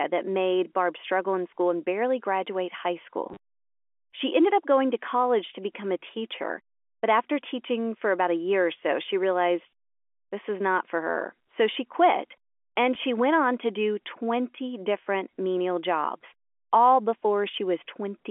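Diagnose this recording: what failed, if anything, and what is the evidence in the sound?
A brief robotic stutter at 3.29–3.37 s and a small blip at 12.95 s point to network packet loss with the last packet repeated: the receiver replayed short packets, likely about 10 ms each, over the G.711 telephone path.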